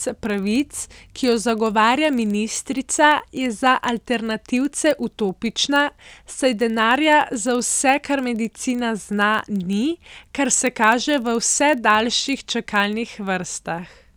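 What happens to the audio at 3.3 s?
At 3.3 s the speech carries a steady low buzz from a filter restarted on every block. It is not a one-off event. The fault runs through the whole clip. The filter drops its memory at each block boundary and starts again from silence. That leaves a small transient at every block start. These ticks repeat at about 23.4 Hz, which fits a 2048-sample block. They fuse into a buzz that rises and falls with the speech level.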